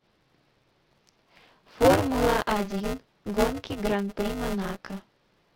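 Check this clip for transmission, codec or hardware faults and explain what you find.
One hardware fault is present: buffer tearing, running for the whole clip. The speech carries a continuous robotic buzz at 200 Hz that appears only while sound is present. The writing program and the playback hardware have slipped out of step, so roughly a third of each 5 ms buffer replays audio about 15 ms old, with hard joins at the buzz rate.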